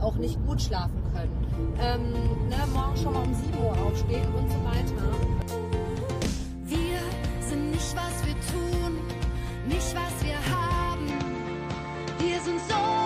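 At 11.10 s the sound turns duller, to the end at 13.06 s. Nothing passes above 8.2 kHz. Faint new background noise appears, far below the signal. There is no gap and no level jump. The input was likely switched to a poorer device.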